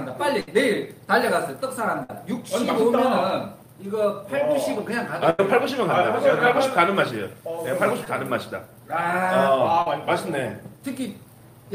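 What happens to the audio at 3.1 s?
Nothing goes wrong at 3.1 s; the audio carries on intact through that moment.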